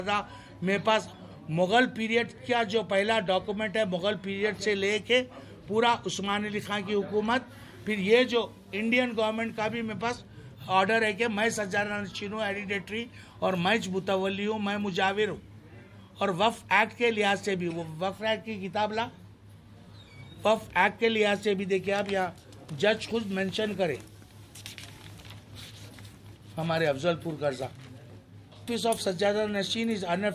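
No technical faults can be heard anywhere in this audio.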